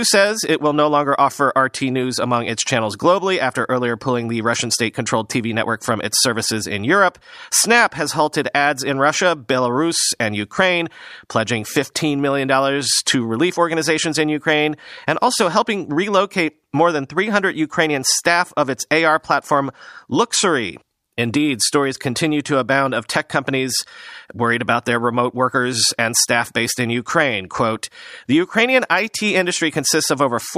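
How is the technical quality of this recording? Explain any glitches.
No technical faults are audible in this speech recording, so there are no glitches to explain.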